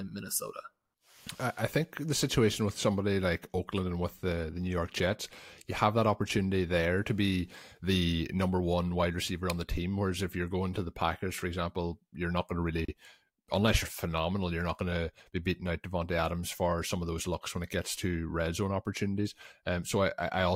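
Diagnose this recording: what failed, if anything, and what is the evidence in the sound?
The failure is at the codec stage: a gap at a join of encoded pieces. Around 12.85 s the speech drops into silence for about 32 ms, with smeared edges, then picks up right where it left off. The pieces were encoded separately and joined untrimmed, leaving encoder start delay and last-frame padding in place.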